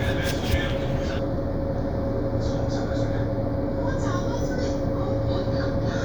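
From 1.19 s to the end, channel delay (comb filtering) hollows the sound: one channel lags by about a fifth of a millisecond. On a spectrogram, fixed notches appear, the first near 3 kHz.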